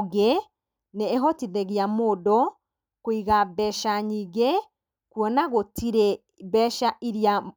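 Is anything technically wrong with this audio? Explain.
No, nothing is technically wrong with this audio.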